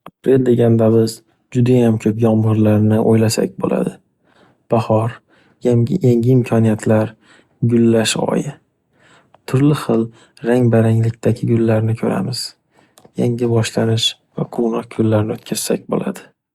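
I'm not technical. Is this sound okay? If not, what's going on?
Yes, nothing in this speech recording points to a technical problem with how the sound was captured or played back.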